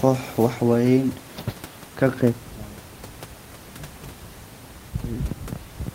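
No technical faults are audible.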